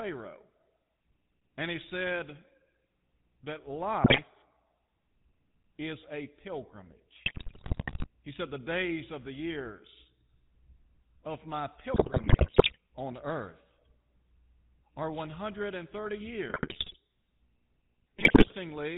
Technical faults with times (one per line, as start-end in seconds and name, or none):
0.00-18.98 GSM full-rate codec
4.04-4.20 GSM bit errors
7.26-8.07 GSM bit errors
11.94-12.77 GSM bit errors
16.50-16.97 GSM bit errors
18.18-18.54 GSM bit errors